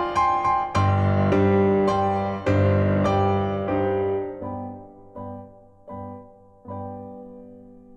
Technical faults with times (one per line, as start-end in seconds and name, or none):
none